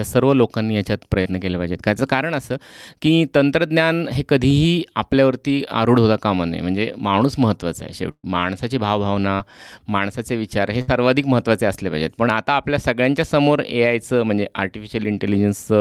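At 1.21 s a short concealed packet loss replaces about 40 ms of speech with a continuation of the preceding sound, heard as a brief smear. On a spectrogram the spectrum runs unnaturally flat and smooth for that instant.

At 8.11 s a burst of packet loss removes about 120 ms. The last sound is held and turned down as it fades, then the waveform drops to near-silence for about 50 ms before speech resumes further on, with the intervening part missing.

At 9.35 s another concealed loss of about 40 ms leaves the same frozen-looking patch.

At 10.81 s a shorter burst drops about 60 ms, showing as a held, decaying tail and an audible skip where the audio rejoins.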